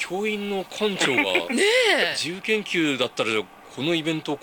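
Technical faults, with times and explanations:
0.00–2.27 s, low bit depth without dither: grainy distortion follows the sound, roughly 35 dB below it. Likely undithered rounding, consistent with 8-bit samples.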